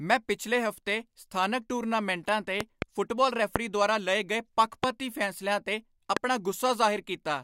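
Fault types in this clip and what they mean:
Loud pop: a sudden voltage pulse, likely from a plug, switch, static or driver glitch, lands on the signal. It sounds as sharp pops around 20 dB above the speech: a double pop at 2.61 to 2.84 s, then single pops at 3.56, 4.84 and 6.17 s.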